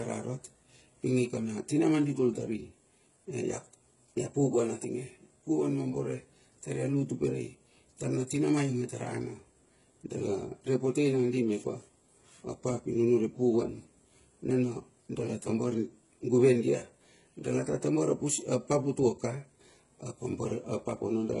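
From start to finish, nothing sounds above 11 kHz. The speech carries two kinds of compression damage at once: the artefacts of both codecs heard together. The likely cause is transcoding between lossy codecs, fitting a very low-rate HE-AAC pass re-encoded as MP3 around 64 kbit/s.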